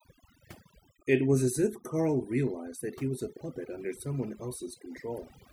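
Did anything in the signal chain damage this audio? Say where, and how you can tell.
Yes. Overdone noise removal runs throughout, a call-processing fault: the suppressor was set too hard, so bands near its noise estimate are pulled down or cut, leaving near-silent gaps with twinkling specks between phrases and quieter speech detail stripped.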